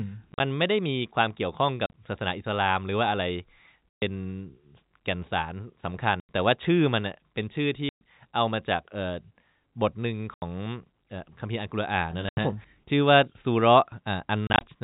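Short, hard-edged holes punch into the speech at 0.32, 1.86, 3.98, 6.2, 7.89, 10.34, 12.29 and 14.47 s. This is packet loss filled with silence: lost packets were replaced by nothing, and losses of 60 to 130 ms in 10 ms steps point to 10 ms packets. At 0.32, 1.86 and 14.47 s the gaps come as scattered bursts of up to 40 ms. The narrow G.711 telephone band, cut off at 4 kHz, is audible throughout.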